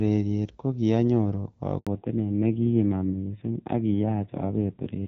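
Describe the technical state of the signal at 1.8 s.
At 1.8 s the signal is inside a handover gap running from 1.79 to 1.87 s, an 80 ms hole where the call was passed between networks and no speech frames arrived during the switch. The sound decays within a few tens of milliseconds and then drops to silence, and whatever was said in that window is lost. On a waveform this is a short flat stretch. On a spectrogram it is a narrow vertical band empty at every frequency.

From 1.87 s, when the sound returns, the call has fallen back to narrowband, moving from the wideband HD Voice codec, which fits AMR-WB at around 12.65 kbit/s, to an older narrowband codec consistent with AMR-NB near 5.9 kbit/s. Everything above 4 kHz is gone until the end of the clip, so the sound turns duller and rougher, with a raspy low-rate coding texture. A spectrogram would show energy reaching to about 7 kHz before the gap and a hard ceiling at 4 kHz after it.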